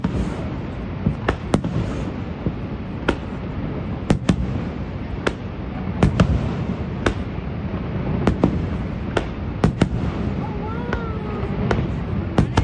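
No technical faults can be heard anywhere in the audio.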